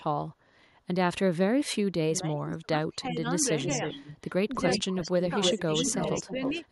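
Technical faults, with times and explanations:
2.08–3.89 s, 5.29–5.73 s and 5.94–6.56 s, speech suppressed in double talk: with both sides talking at once, the echo canceller likely mistook this talker for loudspeaker echo and pulled it down. The speech dips by up to about 20 dB across roughly a second and a half, then by about 10 dB in two shorter patches.
3.63–4.30 s and 4.53–6.60 s, echo leak: the far end's canceller likely failed to remove its loudspeaker pickup, so a copy of the speech returns 316 ms late. It sits about 10 dB below the speech at first, then rises to about 5 dB below.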